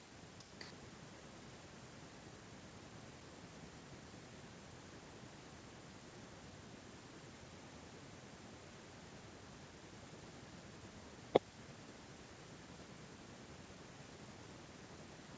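No faults can be heard anywhere in this speech recording.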